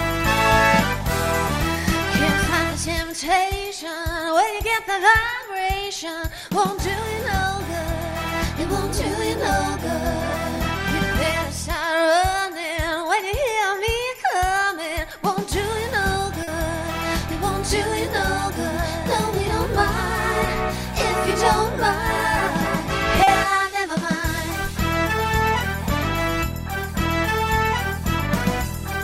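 At 16.43 s and again at 23.23 s, about 40 ms of audio went missing and was concealed, a short concealed packet loss each time. The decoder extended the preceding sound and blended back, giving a brief smear rather than the abrupt silence or click of an unconcealed dropout.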